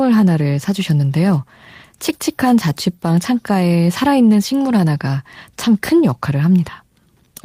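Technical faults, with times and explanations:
No technical faults can be heard anywhere in this speech recording; the signal stays steady and unbroken from beginning to end.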